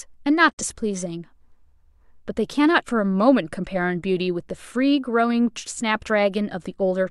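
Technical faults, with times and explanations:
0.51 to 0.63 s, digital broadcast dropout: speech fades out over 20 ms and mutes, losing 43 ms, which fits one corrupted frame the receiver discarded.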